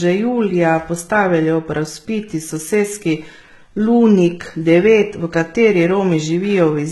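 Throughout, the likely cause is heavy HE-AAC compression rebuilding the treble from copied lower bands, leaving s sounds gritty and metallic, with nothing above 11.8 kHz.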